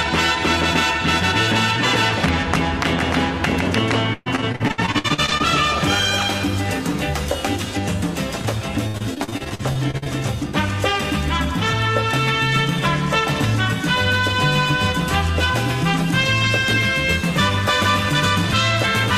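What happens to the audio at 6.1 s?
Nothing goes wrong at 6.1 s; the audio plays through that moment intact, with no dropout, click or distortion.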